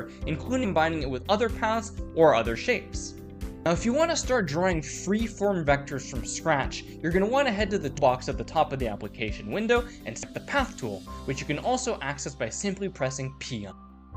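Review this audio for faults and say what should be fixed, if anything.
Five short bursts of damaged data in a compressed stream are audible, at 0.63 to 0.65 s, 3.65 s, 7.97 s, 10.22 s and 13.70 to 13.72 s, each lasting roughly 10 to 20 ms. At each spot the decoder meets corrupted bytes, misreads the frame or loses sync, and produces a brief chirp or squawk until it locks onto a valid frame header again. To prevent this, fetch the file or stream from an intact source and verify it with checksums or error-protected transport, so no bytes are lost or overwritten before decoding.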